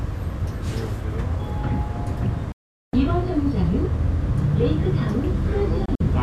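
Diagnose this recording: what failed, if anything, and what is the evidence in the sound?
The sound snaps to silence at 2.52 s through a fade of only about 3 ms, stays muted until 2.94 s (roughly 0.41 s), then resumes further along. From 5.86 to 6.03 s it breaks into two brief holes, the longest about 48 ms, totalling about 72 ms. This is a digital broadcast dropout at the reception stage: corrupted or missing frames failed their checks, the receiver muted rather than play them, and that audio is gone.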